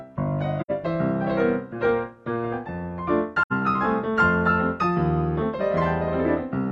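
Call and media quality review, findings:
Soft-edged dropouts, 0.60–0.71 s and 3.42–3.52 s: audio fades out, goes silent, fades back. AAC frame loss with muting; decoder zeroed the missing spectrum and the overlapping windows smoothed the edges. Each gap about 85 ms, which fits two lost frames.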